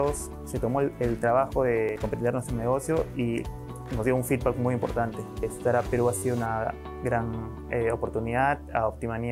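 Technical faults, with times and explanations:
1.89 s and 6.18–6.22 s, repeated buffer: late audio left the device replaying its last block, about 11 ms long, which fits a 512-sample buffer. It plays twice at 1.89 s and five times later. On a waveform, identical segments sit side by side with abrupt joins, and the spectrogram shows vertical lines at each seam.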